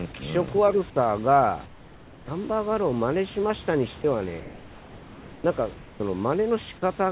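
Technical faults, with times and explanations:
1.66–2.28 s, 4.4–5.44 s and 5.74–6.0 s: comfort noise in place of the background. Room noise turns steady and featureless, about 5 dB quieter at first, then about 2 dB. Sending likely paused during silence.
4.02–4.04 s: sound dropped by the voice detector. A 20 ms piece of sound becomes steady noise. The detector likely mistook it for background.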